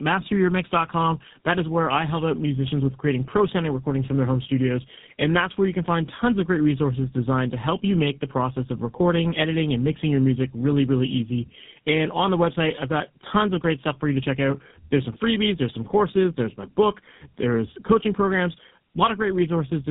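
From start to finish, the speech carries tandem speech coding. The call appears to pass through two low-rate speech codecs in a row, with a plain telephone link between them. Each coder rebuilds the voice from the previous one's flawed output, so the errors stack. The result sounds rough and warbly, with a muffled, boxy quality. Nothing is heard above about 3.8 kHz. The final stage sounds like GSM full rate.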